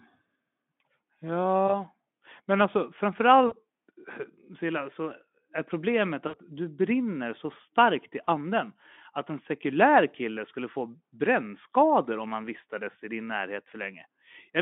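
A speech recording over a Speex narrowband line shows VoIP packet loss concealed by the speech codec at 1.68–1.82, 3.48–3.54, 6.27–6.36 and 8.23–8.29 s. The decoder extrapolates roughly 20–60 ms of missing audio into fading, buzzy sound.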